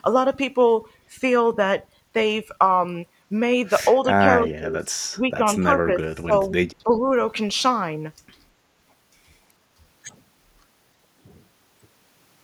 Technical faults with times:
4.02-4.89 speech suppressed in double talk
4.43-4.47 echo leak
5.14-5.44 speech suppressed in double talk
5.88-6.45 speech suppressed in double talk
6.84-7.10 speech suppressed in double talk
6.91-7.00 echo leak

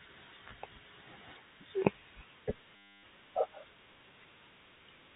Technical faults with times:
2.76-3.03 packet loss with last packet repeated

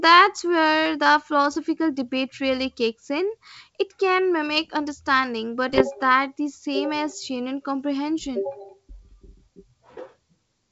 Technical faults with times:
5.69-5.84 bit errors on an ADPCM link

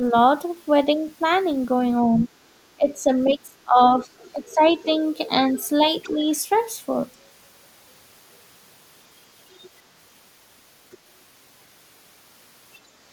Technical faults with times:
2.03-4.63 speech suppressed in double talk
2.20-2.28 other side's voice leaking through
3.82-6.58 other side's voice leaking through
6.13-6.21 speech suppressed in double talk
9.57-9.67 other side's voice leaking through
10.91-10.96 other side's voice leaking through
12.75-12.79 other side's voice leaking through

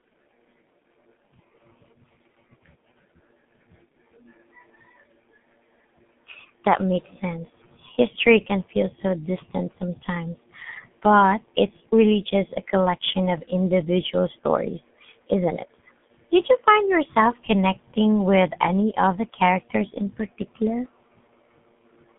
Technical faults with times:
0.00-22.19 G.723.1 codec

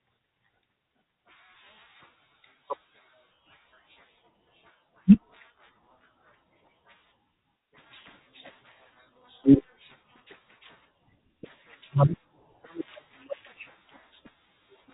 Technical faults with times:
none

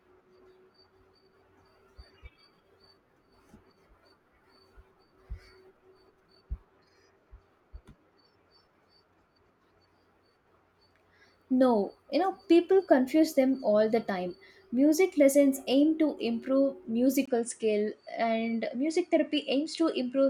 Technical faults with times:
17.25-20.30 input switched to a poorer device

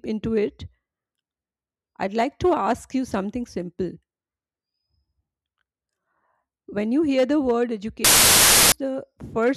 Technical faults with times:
8.04-8.72 samples built from the wrong bytes

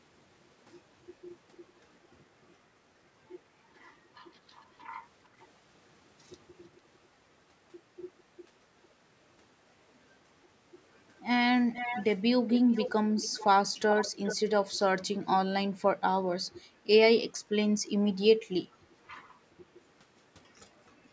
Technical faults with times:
1.53-2.08 echo leak
5.39-5.47 echo leak
6.76-6.81 echo leak
11.72-14.36 echo leak

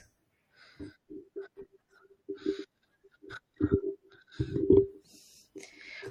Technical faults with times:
0.00-6.11 MP3 compression

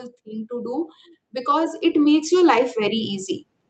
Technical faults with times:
0.23-3.11 automatic gain rising

